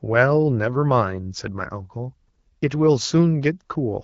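Listening through the speech, which carries the band-limited character of the AMR wideband (HD Voice) codec at 12.65 kbit/s, nothing stood out as a technical problem.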